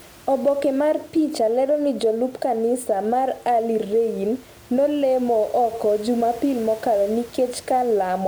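There are no technical faults to describe in time order; the only background is the room noise, about 26 dB below the speech.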